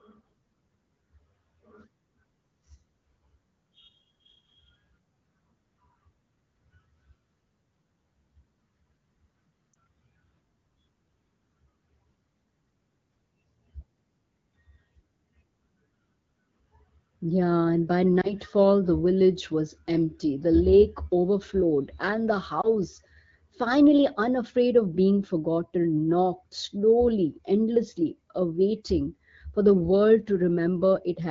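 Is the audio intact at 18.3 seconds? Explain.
No. A lost AMR speech frame falls between 18.21 and 18.33 seconds. A radio error corrupted one frame, about 20 ms of speech, so it failed its checksum. The AMR-WB decoder then had no data for that slot. It rebuilt the gap from the last good pitch and vocal tract settings, at reduced gain. The result is a brief dip or warble in the voice, which then comes back weak or rough for a moment.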